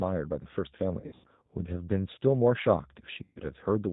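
From start to finish the speech has that G.729 codec sound, and the damage is plainly audible. At 8 kbit/s the codec rebuilds each 10 ms frame from a vocal tract filter, a pitch predictor and a handful of pulses, so there's a rough, slightly synthetic edge to it. Nothing above 4 kHz gets through, which leaves the top end dull and boxed in.

Then between about 1.00 and 1.27 s you get VoIP packet loss concealed by the speech codec. Around 180 ms of audio goes missing in patches across roughly 240 ms, and the longest gap is about 90 ms. The decoder covers each hole by stretching its last pitch and filter and turning the gain down frame by frame, so the sound smears into a buzzy tone or coloured noise that fades. It stays weak for a bit after the real packets come back, because each frame builds on the one before.

The same thing happens again from about 3.24 to 3.40 s, this time with about 120 ms lost. 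It's the same stretched sound fading out, followed by a short weak stretch while the decoder recovers.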